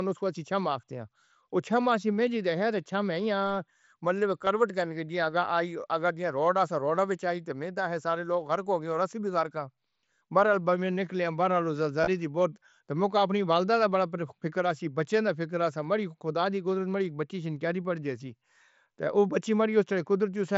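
At 4.45 s and from 12.01 to 12.07 s, concealed Bluetooth headset packet loss fills missing packets with repeated recent waveform, heard as a brief buzz and a slight warble.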